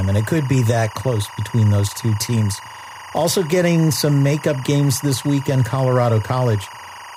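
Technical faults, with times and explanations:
Throughout: timecode bleed. A thin, steady chirping warble runs behind the speech, sitting roughly 20 dB under it and alternating between two pitches near 1 and 2 kHz. Linear timecode from an adjacent track or cable is leaking into the audio path. That code is a square wave that switches between those two frequencies as it encodes each bit. Its regular rhythm suggests code running at 23.976 frames per second.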